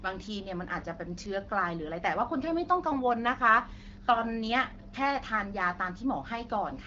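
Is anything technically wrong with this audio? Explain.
No, nothing technically wrong is audible here.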